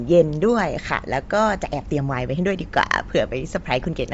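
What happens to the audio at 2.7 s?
At 2.7 s the speech carries Bluetooth LC3 compression, present across the whole clip, with the artefacts plainly audible. The likely cause is an LE Audio link at low bitrate, around 32 kbps with 10 ms frames. It strips the upper spectrum and refills it with noise, giving a breathy, grainy edge.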